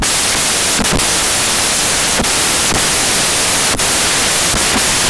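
From the first moment to the end, the speech is buried under loud, harsh broadband noise because its samples are built from the wrong bytes. The low-order bits land in the high positions.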